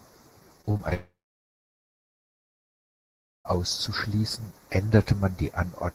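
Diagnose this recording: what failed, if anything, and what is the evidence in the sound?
Channel delay (comb filtering) runs throughout, from the stereo wiring or mono downmix. One channel lags by a fraction of a millisecond, so summing notches the speech from around 3 kHz, sounding hollow.

Repeated packet loss (robotic sound), 0.61 to 0.94 s, is a network fault. Five gaps, the longest 38 ms, are patched by extending prior sound, leaving choppy speech.

From 0.94 to 3.47 s, concealed sound fades into roughly 2.3 s of silence before speech resumes with that stretch missing, likely a long network dropout where packets never arrived.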